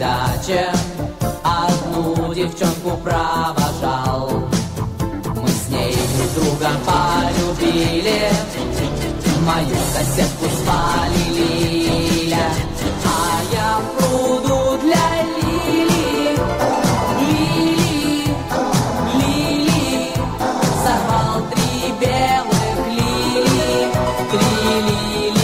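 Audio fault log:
9.50–11.50 s, adaptive stream at a lower bitrate: for two seconds codec artefacts rise, then full quality returns just as abruptly, with no gap or dropout at either switch. The player fell back to a lower-bitrate rendition when throughput dipped, and the sound fits a step from about 64 down to 16 kbit/s Opus. On a waveform the signal stays continuous.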